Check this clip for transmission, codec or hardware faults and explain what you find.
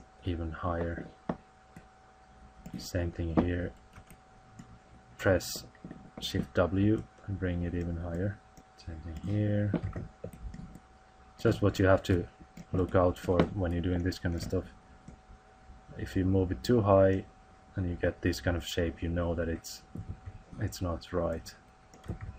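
Two codec and transmission faults are audible: steady compression damage throughout, and two brief bursts of burbling from bit errors.

MP2 compression runs throughout. The dull, gurgling, granular character likely comes from MPEG Layer II coding starved of bits, which fits roughly 80 kbps. With so few bits, upper sub-bands switch off and the rest are coarsely quantised. A spectrogram shows the top end flickering in blocky patches.

DAB burbling strikes at 13.96 s and again from 18.04 to 18.13 s. A small fraction of bit errors corrupted samples, putting noise into single sub-bands. It sounds like short blips of noise, and a spectrogram shows isolated bright rectangular tiles.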